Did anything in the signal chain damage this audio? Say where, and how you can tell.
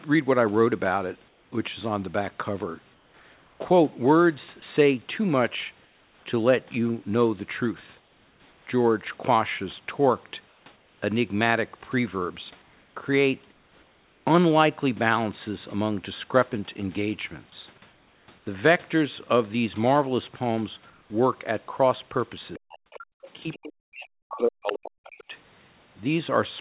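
Yes, and the damage is in the call-processing stage rather than the wiring, converters or codec.

Comfort noise in place of the background: the natural room tone gives way to a flat, featureless hiss, in some stretches about 3 to 4 dB quieter, at 1.28–1.52, 2.94–6.26, 8.0–8.66, 10.48–11.02, 12.62–14.26, 17.92–18.46 and 20.9–21.1 s. This is likely discontinuous transmission, with the receiver synthesising noise while the sender paused.

Sound dropped by the voice detector: at 4.6 s, inside a synthetic-noise stretch, about 20 ms of real sound vanishes under the steady hiss. The sender's voice detector likely judged that brief sound to be background, stopped transmitting, and let comfort noise cover it.

Other side's voice leaking through: faint scraps of a second voice appear at 22.54–23.06, 23.23–23.29, 23.52–23.57, 24.67–24.73 and 25.18–25.24 s. They sit well below the main speech, loudest near 24.7 s. 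The echo canceller likely failed to remove loudspeaker playback from the microphone.

Speech suppressed in double talk: the main speech collapses almost to nothing, at roughly 40 dB down, at 22.58–22.7 and 23.33–25.07 s, with a smaller dip at 25.28–25.33 s. The echo canceller, likely confused by both sides talking, attenuated everything.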